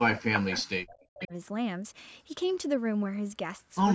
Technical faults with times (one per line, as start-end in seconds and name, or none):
0.00-1.33 speech suppressed in double talk
0.34-0.58 echo leak
1.04-1.27 echo leak